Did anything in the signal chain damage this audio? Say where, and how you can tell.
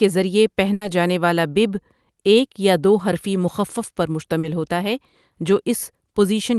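Yes, at the network stage, in two places. A burst of packet loss hits at 0.73 to 0.83 s, just before "جانے والا 'بِب' ایک". About 80 ms of the sound is held over and faded by the receiver, and the roughly 80 ms of real audio it replaces is simply gone when playback resumes. A plain dropout would fall silent or click. This one fills the gap with a dimming continuation of the last sound, and the audio afterwards picks up further along than it should.

A short concealed packet loss occurs at 4.39 to 4.45 s, between "دو حرفی مخفف پر" and "ہوتا ہے جو". Here only about 40 ms went missing. The decoder extrapolated from the preceding sound and cross-faded back into the real signal, so what you hear is a brief smear rather than a hard tick. That blend, and the absence of a long fading tail, separate it from the longer burst. Both events ride on an Opus call path whose top end stops near 12 kHz.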